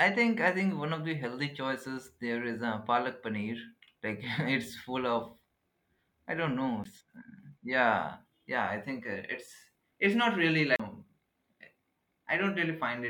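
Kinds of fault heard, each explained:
CD skip: The speech cuts out in a brief tick and picks up from a different point, with no smooth continuation, once at 6.84 s with a very short mute of around 15 ms and again from 10.76 to 10.80 s with a mute of roughly 40 ms. The laser has lost its track and landed on another turn of the disc's spiral, so the player silences output momentarily and then resumes reading from the new position.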